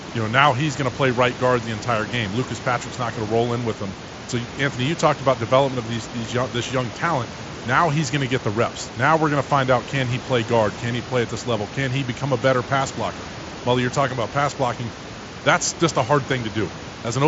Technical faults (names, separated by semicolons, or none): none